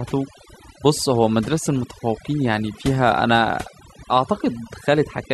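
A noise reduction stage set too aggressively, overdone noise removal, runs throughout this speech, leaving near-silent gaps with twinkling specks.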